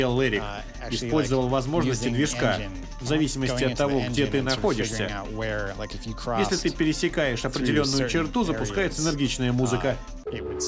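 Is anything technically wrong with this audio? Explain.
No, nothing technical stands out here; the audio comes across steady and intact the whole way, with nothing to flag.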